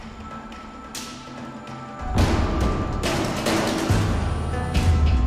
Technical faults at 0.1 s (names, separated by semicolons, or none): block size mismatch (truncated)